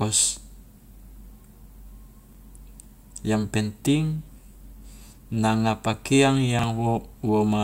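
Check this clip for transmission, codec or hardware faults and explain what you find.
Two brief chunks-out-of-order faults, at 2.33 to 2.37 s and 6.59 to 6.64 s. Each time one 21.33 ms chunk plays a slot late. The swapped order leaves hard joins, heard as a short jumbled blip.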